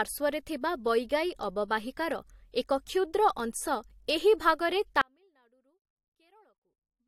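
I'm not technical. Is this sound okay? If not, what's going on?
No. There is an audio dropout to a faint residue starting at 5.01 s, right after "ଅଂଶ ଏହି ଭାଗରେ", and it lasts to the very end. The speech cuts off suddenly rather than pausing or fading, and all that remains is a very faint trace of sound far below the normal level. This is likely because the signal was lost on its way in while the recording kept running, so only a weak leak got through.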